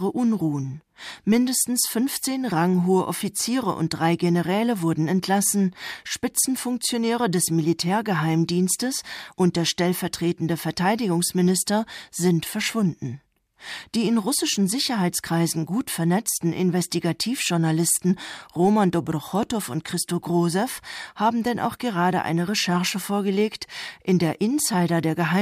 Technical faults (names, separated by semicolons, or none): bit error spike